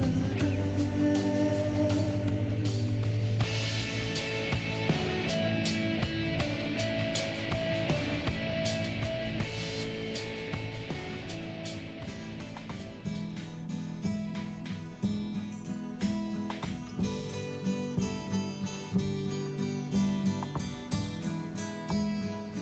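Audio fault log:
Nothing to log here; the audio just carries the usual character of a call line, with nothing above about 8 kHz, as you'd expect from a call codec running at that bandwidth.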